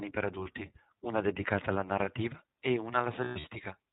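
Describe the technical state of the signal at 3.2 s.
At 3.2 s you're right at the edge of a burst of lost iLBC frames, running from about 3.24 to 3.47 s. Packets went missing, and the decoder filled each gap by repeating the last pitch cycle blended with noise. About 160 ms of audio is gone, scattered over roughly 200 ms, with the longest stretch around a tenth of a second. It comes across as a held, slightly buzzy, breathy vowel, then snaps back almost immediately because each frame decodes on its own.

Underneath that, the whole clip carries the iLBC codec itself, and its damage is plainly audible. It's narrowband, so nothing above 4 kHz survives and the speech sounds boxed-in. Each frame's excitation is coded independently, which gives the voice a faintly rough, synthetic edge. The sound fits the 20 ms, 15.2 kbps mode, so at 3.2 s you're hearing both the dulled bandwidth and the onset of the concealment.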